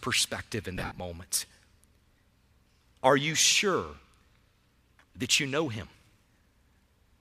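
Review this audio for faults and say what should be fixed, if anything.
Lost LE Audio frames between 0.76 and 1.00 s. About 150 ms of the speech is missing, spread across a 240 ms stretch, with the longest gap around 70 ms. The 150 ms total fits a run of 7.5 ms LC3 frames. The decoder fills each hole by repeating the last spectrum with randomised signs. Where frames were voiced, this turns into a noisy smear, and across the longest gap it fades toward silence before real audio resumes. The light codec softening elsewhere is only the normal effect of the compression. To prevent this, improve Bluetooth link reliability by shortening the distance, reducing 2.4 GHz interference, or allowing more retransmissions per isochronous interval.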